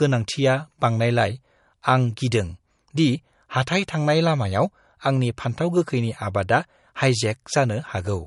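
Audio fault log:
throughout, low-bitrate audio saved at a high bitrate: the speech has nothing above 11.1 kHz and keeps the artefacts of its earlier low-bitrate encoding with dulled consonants, and the high bitrate of the file does not restore any of it. The likely cause is an earlier MP3 encode at around 49 kbit/s re-saved as a 320 kbit/s MP3. On a spectrogram the energy stops abruptly at a flat ceiling near 11.1 kHz.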